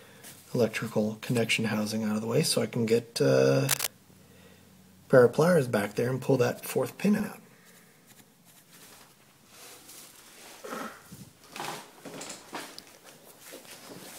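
From 3.69 to 3.87 s there is a burst of cable scratch noise: dense, uneven crackling and rustling, about as loud as the sound itself, laid over it for less than a fifth of a second. It is likely a worn cable, connector or control being moved, so that its contact resistance jumped around rapidly. Unlike a single click or dropout, the noise is irregular and grainy and lasts for a stretch, with no gap in the signal.

From 7.20 to 12.44 s the audio carries channel delay heard as doubling. One channel runs 85.33 ms behind the other, a lag that fits a 4096-sample buffer, and when the two are summed to mono the late copy stands apart as a slap echo at the same level as the original. Room reverberation would decay and smear, and comb filtering would come from a delay too short to hear as separate. Here the lag is long enough that the second copy is heard as a distinct repeat.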